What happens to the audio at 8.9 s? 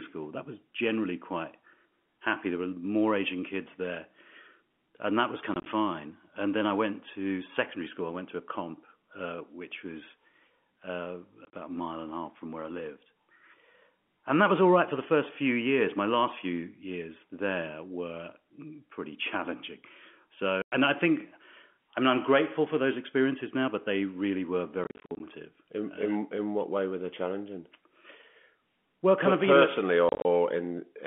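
At 8.9 s the speech carries straight through with no dropout, click or distortion, only the narrow, telephone-band sound of G.711 coding working as it should.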